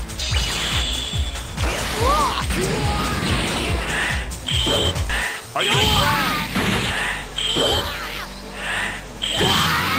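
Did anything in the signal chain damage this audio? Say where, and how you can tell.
Yes, there's a skip ahead at about 5.09 to 5.11 s, and it looks like the network or jitter buffer stage. The sound jumps straight forward with no gap at all, and roughly a second of material is just gone, with the two sides butted together almost directly. That points to a chunk of audio being dropped, in transit or when the jitter buffer overflowed, while later audio was already queued, so playback simply resumed about a second further on.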